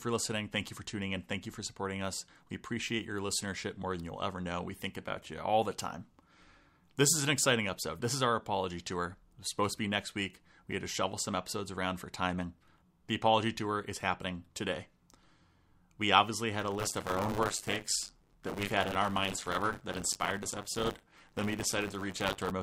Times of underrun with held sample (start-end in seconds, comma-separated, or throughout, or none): none